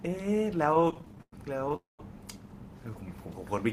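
From 0.71 s to 1.74 s, packets kept reaching the receiver late or more slowly than they were being played, so its jitter buffer ran dry 21 times. This is repeated stalls (stutter). Each time the receiver stretched the last bit of sound to cover the wait, about 300 ms in all, with the longest single gap near 100 ms. That is roughly a third of the stretch. The speech drags and jerks, though nothing is lost.

At 1.76 s the flow most likely stopped outright, a call audio freeze, when packets were held up in transit and the buffer emptied once more. The receiver carried the last sound forward as a fading buzz or hiss, which sinks into about 160 ms of silence before the speech resumes at 2.00 s exactly where it left off. The inserted 226 ms pushes everything after it that much later.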